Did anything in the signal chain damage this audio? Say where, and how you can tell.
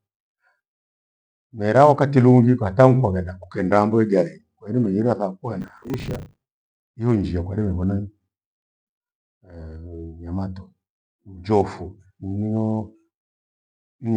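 Yes, processor overload crackle at the driver/buffer stage, 5.61 to 6.41 s: gritty tearing as roughly 10 ms buffers repeatedly missed deadlines and replayed stale audio.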